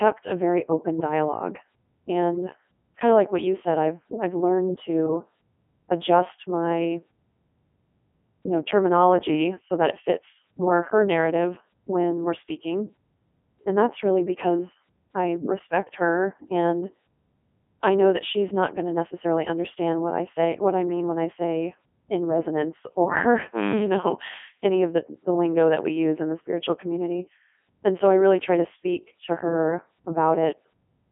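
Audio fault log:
throughout: Codec 2 vocoder. The speech is rebuilt from pitch, voicing, energy and a coarse spectral envelope instead of the original waveform, so it sounds robotic and buzzy with heavy damage. The sound sits in a telephone-like 250 Hz to 3.4 kHz band with nothing above 3.6 kHz, and the codec runs in its 3.2 kbit/s mode. A plain band-limited phone line keeps the natural texture of the voice. Here sine-wave resynthesis replaces that texture with a synthetic buzz.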